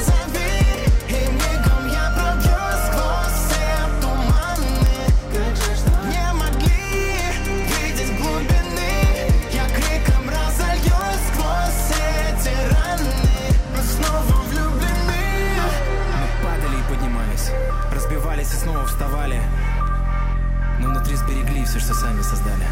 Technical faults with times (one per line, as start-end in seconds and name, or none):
0.78-22.60 word clock ticks